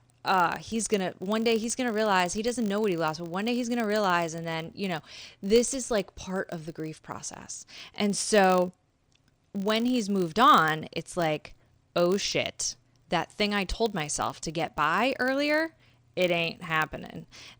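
Right through the speech there's a filter restarted on every block: it drops its state each time, so every roughly 20 ms block starts with a tick, giving a 50 Hz buzz that follows the level.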